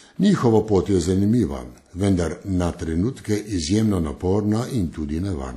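Throughout the speech a washy, ringing smear hangs on each syllable, with a hiss that swells and recedes with the signal and nothing above 14.1 kHz. This is likely WMA compression: long transform blocks spread quantisation noise in time, and the damage fits a bitrate near 48 kbps.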